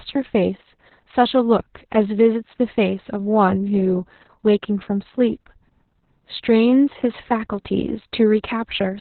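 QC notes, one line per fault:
Throughout: Opus voice compression, heavy. The speech has nothing above about 4.3 kHz, so it sounds muffled and boxed-in like an old phone line, which points to the narrowband SILK mode at a very low bitrate, around 6 kbps. At that rate the linear-prediction coder keeps only a coarse outline of the vocal excitation, leaving the voice hoarse, buzzy and slightly robotic.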